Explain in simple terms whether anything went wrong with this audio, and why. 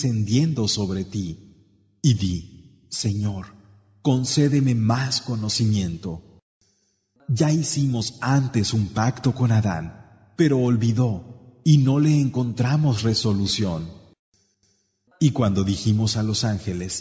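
Nothing went wrong here; I listened all the way through and didn't hear any glitches, dropouts or other problems.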